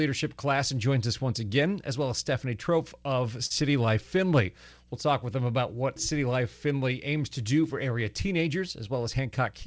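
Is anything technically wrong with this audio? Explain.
Yes. There are two faults, both from the call's jitter buffer.

From 3.46 to 3.52 s there is a short stall from a late packet. A packet arrived late and the buffer ran dry. The receiver stretched the last sound by about 43 ms, then resumed where it stopped. Nothing is lost, but that sound lingers with a faint buzz or dip.

From 9.05 to 9.52 s there is a jitter buffer speed-up. The buffer was holding more audio than its target. The receiver trimmed tiny pitch-period slices in quick succession, roughly 50 ms in all. The speech runs about 8 percent fast at unchanged pitch and sounds hurried.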